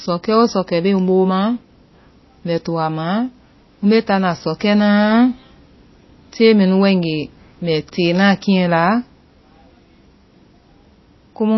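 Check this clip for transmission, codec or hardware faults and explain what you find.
One fault runs through the whole clip. MP3 compression, throughout, is the likely cause: the treble stops dead at about 5.8 kHz, which fits a low bitrate around 24 kbps, where the encoder drops the top band to save bits and discards weak spectral lines that then flicker in and out between frames. The damage is plainly audible: the speech sounds dull and watery, with a swirling, metallic edge on s sounds and softened consonant attacks.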